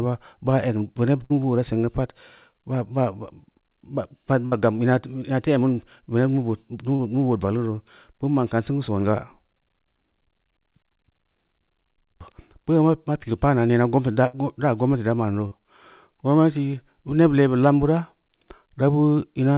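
At 1.24 s there's a burst of packet loss lasting until about 1.32 s. A run of packets never arrived in time, so the receiver stretched the last bit of sound for roughly 57 ms and faded it, then jumped ahead, skipping about 60 ms of real audio. You hear a short held buzz or hiss and then a lurch forward. The same thing happens at 4.46 to 4.54 s.

At 6.96 to 7.01 s there's a short concealed packet loss. About 40 ms went missing and was papered over with roughly 30 ms of extrapolated sound, pitched or noisy depending on what came before, before blending back in. It comes across as a quick smear or wobble.

Another burst of packet loss runs from 14.27 to 14.35 s, with about 67 ms of filled sound covering a 60 ms hole.

A second short concealed loss follows at 15.47 to 15.53 s, with about 41 ms of fill standing in for 40 ms of missing audio. That's another brief wobble. Throughout, the call path cuts everything above 4 kHz, which fits G.711 A-law.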